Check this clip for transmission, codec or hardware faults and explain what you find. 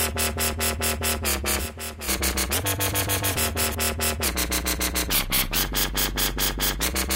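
One fault is present: a doubled audio track from 1.47 to 3.75 s. During that stretch a second full-band copy of the sound trails the original by around 0.7 s, roughly 10 dB quieter, with no decay or room colouring, and it switches on and off abruptly at those times. The likely cause is the same signal being captured again through a slower path and mixed back in. On a waveform, each transient gets a smaller twin about 0.7 s later. On a spectrogram, the original's patterns reappear, fainter but otherwise identical, shifted right by the same fixed offset, with hard edges where the copy begins and ends.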